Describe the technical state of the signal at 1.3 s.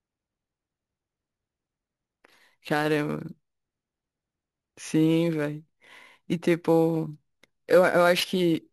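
At 1.3 s the speech carries imaging from sample-and-hold upsampling, present throughout. Each sample was simply repeated, without smoothing, which fits a 16 kHz source raised to 44.1 kHz. A mirrored copy fills 8 to 16 kHz at about 22 dB below the speech, heard as a metallic fizz.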